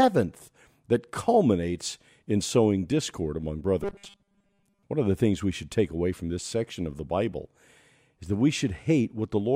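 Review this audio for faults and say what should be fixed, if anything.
From 3.83 to 4.84 s the speech turns into a rigid, metallic buzz at 200 Hz. It follows the talking only loosely. The likely cause is robotic sound from repeated short buffers. New audio arrives too seldom, so the player loops the last fragment. A 200 Hz buzz means each repeat lasts 5 ms. Most of that second is repeated material, and the real audio is skipped. To prevent it, give the receive buffer enough headroom that it never runs dry.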